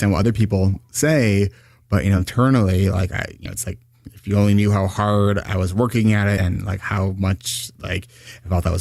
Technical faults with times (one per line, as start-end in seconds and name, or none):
2.17-2.23 compressed frames skipped
3.45-3.48 compressed frames skipped
6.37-6.40 compressed frames skipped